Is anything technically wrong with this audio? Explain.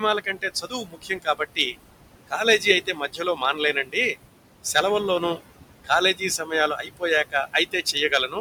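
Yes. Two related faults come from a noise suppressor.

Noise suppressor artifacts run through the whole clip. The suppressor judges each frequency band, frame by frame, and pulls down whatever it takes for steady noise, here by about 20 dB. The room noise sits about 11 dB below the speech. It drops away in the gaps and comes back up under the speech.

Speech cut by the noise suppressor happens in three stretches: 0.0 to 1.76 s, 2.27 to 3.96 s, and 5.84 to 8.37 s. Here the suppressor mistook parts of the speech for noise and turned them down with the background. The deepest drops are about 18, 19 and 20 dB. Each stretch loses well under a second of sound in total. Soft consonants and word endings sound swallowed or faint.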